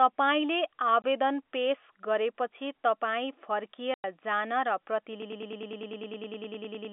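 A speech recording carried over a telephone-band G.711 A-law path, with its 250 Hz to 3.5 kHz line band audible, suffers packet loss filled with silence. The receiver lost data and substituted nothing, so the sound drops out with hard edges from 1.02 to 1.04 s and again from 3.94 to 4.04 s. Those 20 ms and 100 ms gaps fit a 20 ms packet size. From 5.22 s to the end, a broken-record loop takes over, most likely from a stalled player or stream re-sending the last fragment it held. A 0.10 s slice repeats back to back about 17 times, and the audio that should have played in that span is lost.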